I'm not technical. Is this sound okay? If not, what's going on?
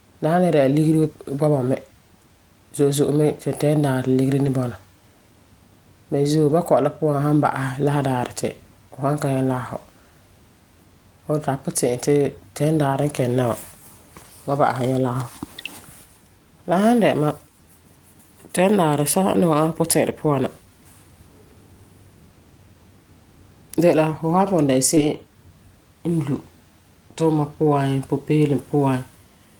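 No. In six places a piece of the call got lost, and each time it was rebuilt from a rough backup copy carried in the next piece. This is called a lost packet rebuilt from error correction. At 1.03, 4.45, 6.49, 12.93, 24.97 and 26.35 seconds, the sound turns briefly rougher and noisier for about 20 ms.

At 24.95 to 24.99 seconds there is also a short concealed packet loss. About 20 ms of sound arrived too late, and the receiver covered part of the hole by stretching out what came just before. It can be heard as a quick smear or wobble.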